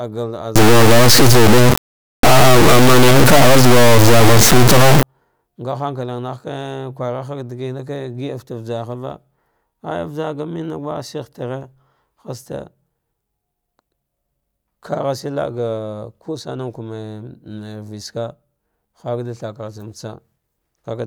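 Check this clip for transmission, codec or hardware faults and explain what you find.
One fault is present in this speech clip. From 0.56 to 5.03 s there is an integer-read-as-float error. The pattern fits 32-bit integer samples being interpreted as 32-bit floats. Most values come out either near zero or far beyond full scale, so the output slams between silence and the clipping limit. It is heard as a harsh, extremely loud square-wave buzz that drops out in the quietest moments. On a waveform it appears as a solid rail-to-rail block. On a spectrogram it appears as dense broadband energy with strong harmonic striping.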